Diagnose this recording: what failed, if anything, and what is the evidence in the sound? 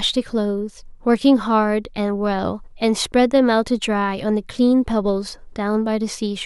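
Listening through the speech, nothing stood out that would point to a failure at any stage of the chain.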